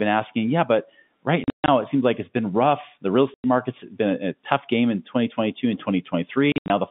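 At 1.44 to 1.68 s, 3.34 to 3.44 s and 6.52 to 6.7 s, packet loss filled with silence cuts holes, gaps fitting 20 ms packets, into the narrowband G.711 telephone line.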